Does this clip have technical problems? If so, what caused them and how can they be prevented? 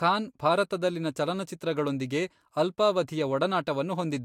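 No, there are no technical problems in this recording.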